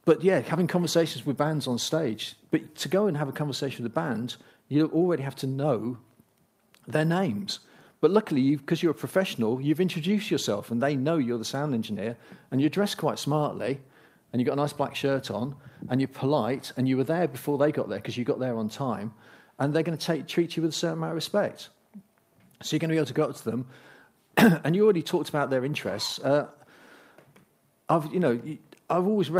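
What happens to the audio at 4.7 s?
Nothing goes wrong at 4.7 s; the audio carries on intact through that moment.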